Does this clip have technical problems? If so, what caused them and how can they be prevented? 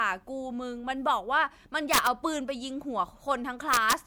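Yes. Violent cracks at 1.94–2.07 s and 3.74–3.93 s are integer overflow: peaks about 7 dB and about 1 dB over the limit wrapped to the opposite sign. Saturating arithmetic or extra headroom before the gain stage prevents it.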